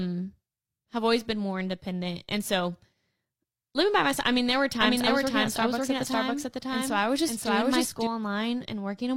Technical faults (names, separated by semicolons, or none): doubled audio track